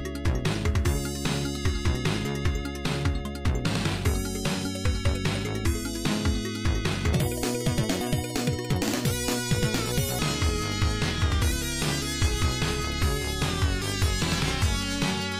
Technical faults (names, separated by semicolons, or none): section at the wrong speed